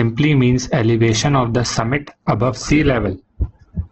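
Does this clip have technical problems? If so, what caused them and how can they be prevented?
Yes. From 1.10 s to the end, the speech suddenly loses its treble, with nothing above about 8.4 kHz, and takes on a thinner, smeared quality. This is an adaptive stream at a lower bitrate. When the connection slowed, the player switched to a cheaper encoding, and the drop points to something like Opus going from 64 to 12 kbit/s. A network dropout would leave a gap or stutter, but here the audio continues without a break and only its quality falls. Buffering more ahead, or capping how far the adaptive logic may step down, would prevent this.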